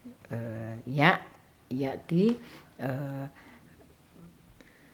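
No technical faults can be heard anywhere in the speech. Nothing in how the audio was captured or delivered calls for comment at any point.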